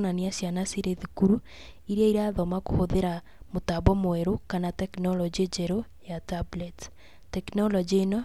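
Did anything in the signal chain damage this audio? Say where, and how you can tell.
No, nothing in the signal chain audibly damaged this speech recording, and the signal arrives intact at every stage from capture to playback.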